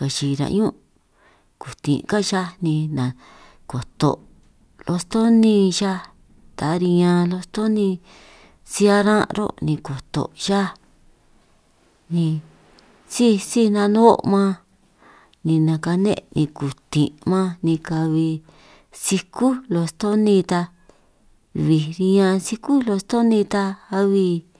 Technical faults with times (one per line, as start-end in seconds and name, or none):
none